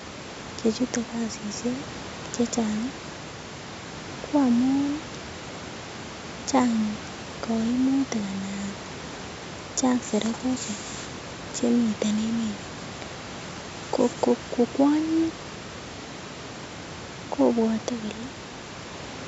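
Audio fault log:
No faults are present in this speech clip. The call microphone processing leaves nothing above 8 kHz, and the room noise sits about 17 dB below the speech.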